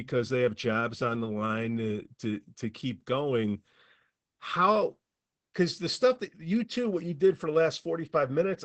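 Opus voice compression affects the speech from start to finish. The band stops near 8 kHz, so the top end is missing. The excitation is coded coarsely. Voices sound muffled, hoarse and slightly robotic. The damage is plainly audible, which fits a low bitrate of about 12 kbps.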